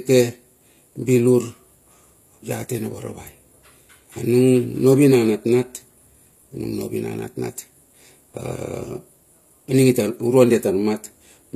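From start to finish, the speech carries the sound of HE-AAC compression, which is the likely cause, at a damage level that fits a bitrate around 24 kbps. Only the lower spectrum is coded faithfully. The treble is synthesised by copying lower bands upward under a coarse envelope, so its harmonics fail to line up with those below. Sibilants come out gritty and lispy, and nothing is present above 14.9 kHz.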